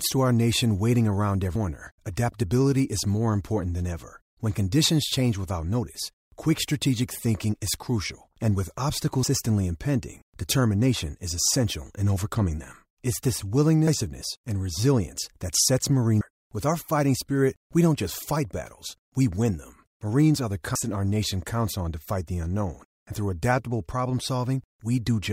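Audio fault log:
20.75 s, compressed frames skipped: the speech jumps forward abruptly, dropping around 150 ms of audio in one step. The gap corresponds to whole 32 ms frames never reaching playback, either missing from the stream or rejected by the decoder as corrupt. The size of the jump points to roughly four consecutive frames.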